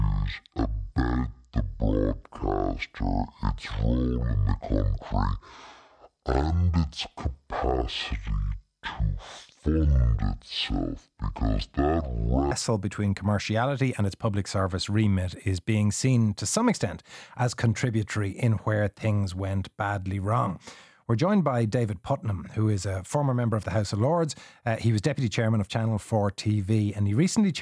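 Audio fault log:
0.00–12.52 s, wrong sample rate: the speech runs at half speed and 12 semitones low, slow and deep. The samples were clocked out at roughly half their recorded rate with no conversion, which fits 44.1 kHz material played at 22 kHz. The slowdown ends just before "between commerciality and its".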